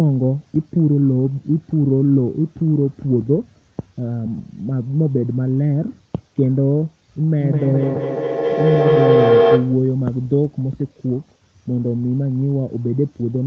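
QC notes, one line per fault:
7.4–9.97 s, feedback howl: a tone near 500 Hz swells until it peaks about 4 dB above the speech, pulsing roughly every 200 ms. Two devices on the call share a room. Each microphone-to-loudspeaker trip adds level, so the repeats grow instead of fading until the loop breaks.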